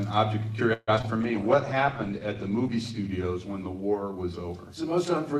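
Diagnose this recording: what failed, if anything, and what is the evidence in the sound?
Network stage: repeated packet loss (robotic sound) from 0.73 to 1.05 s. Four concealed gaps, the longest 141 ms, are smeared into repeats that show as stretched, blurred spectrogram frames.

Jitter buffer slow-down, 1.18 to 2.20 s: the receiver repeated pitch periods, adding 86 ms. Playback runs at 92% speed, and the waveform shows periodic cycles repeated in a row.

Codec stage, call bitrate drop from 1.24 to 5.14 s: the rate fell from 128 to 15 kbps, making the sound rough and watery. The spectrogram's top edge drops from 20 kHz to 12 kHz.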